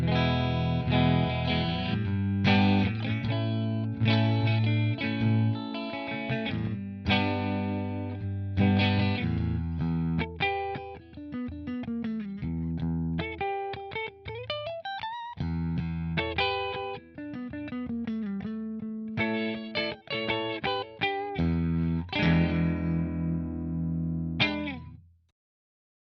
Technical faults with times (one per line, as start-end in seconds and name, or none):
none